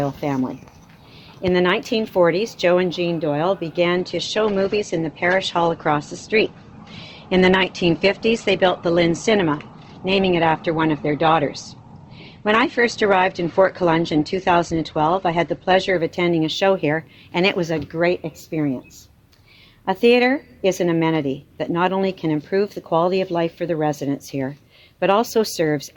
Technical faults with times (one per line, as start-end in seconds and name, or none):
3.97-15.97 adaptive stream at a lower bitrate